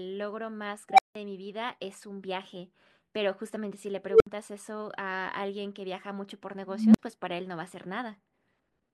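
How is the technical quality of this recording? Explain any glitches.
Three bursts from an unstable filter spoil the speech: at 0.89 s, a roughly 700 Hz tone swells over 94 ms; at 4.07 s, a lower 400 Hz-ish tone over 132 ms; at 6.66 s, a deep 200 Hz-ish tone over 284 ms. A recursive filter's feedback runs away, so a squeal balloons, clips, overflows and drops out for 171, 64 and 43 ms respectively.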